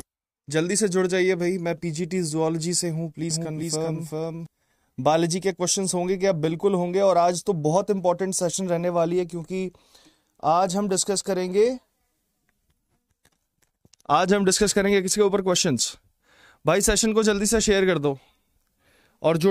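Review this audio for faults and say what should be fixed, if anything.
Doubled audio track at 3.30–4.46 s: an equally loud dry copy trails about 400 ms behind and cuts in and out abruptly, likely from a slower second capture path. Feed the source through one capture path only, and check edits for overlapping duplicate regions before export.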